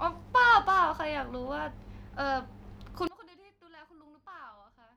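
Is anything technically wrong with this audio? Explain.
Yes. From 3.07 s to the end, the speech falls about 25 dB to a faint trace, likely from one channel inverted cancelling in mono.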